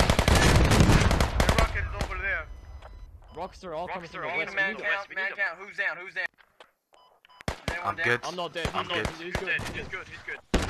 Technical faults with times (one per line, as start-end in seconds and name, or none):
none